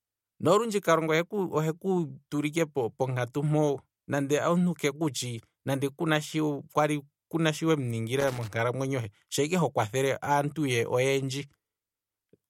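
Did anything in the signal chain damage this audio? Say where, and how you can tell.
Yes, in the analogue wiring: there's loose connector crackle from about 8.20 to 8.48 s, an irregular burst of scratchy crackle over the speech. That's a worn or dirty contact flickering open and closed, chopping the signal and popping wherever DC sits on the line.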